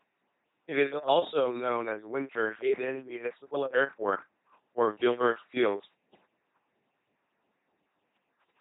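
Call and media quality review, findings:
LPC-10 vocoder on the speech path for the full clip, coding consistent with a 2.4 kbit/s link. Heavy codec damage: voice rebuilt from a ten-pole vocal tract filter excited by pulse train or noise only.

Symptom: buzzing, mechanical robot voice throughout. Each frame forced fully voiced or fully unvoiced, so misjudged frames add buzz to hissy sounds or hiss to voiced ones. Nothing above 3.9 kHz, leaving a narrow, dull band.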